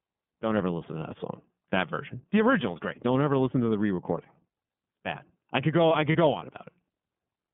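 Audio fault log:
throughout  iLBC codec: nothing above 3.4 kHz or below about 150 Hz gets through, and the sound has a rough, slightly synthetic texture. The codec rebuilds each frame's excitation independently, which fits the 13.33 kbps mode with 30 ms frames. Plain telephone band-limiting would sound dull but smooth, not grainy like this.
6.12–6.16 s  lost iLBC frames: right after "I could go I" and before "go on", the sound turns into a brief held, buzzy vowel. The decoder repeats the last pitch cycle mixed with noise, which fits a single lost 30 ms frame. A dropout would leave silence instead. Because iLBC frames stand alone, the sound returns cleanly at once, without the lingering smear that follows a loss in a predictive codec.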